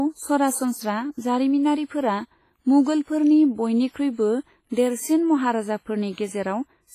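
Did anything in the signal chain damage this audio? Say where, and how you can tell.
Yes, at the codec: heavy WMA compression throughout, with ringing, washy hiss breathing with the speech and nothing above 15.3 kHz. That points to a low bitrate, likely around 24 kbps.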